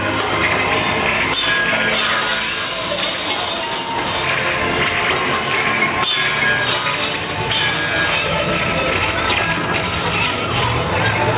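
From 8.18 s to the end, the pace abruptly jumps to 1.48 times normal while the pitch holds, making the sound rushed. This time-stretched section was likely squeezed by software that dropped short pieces to fit a shorter length.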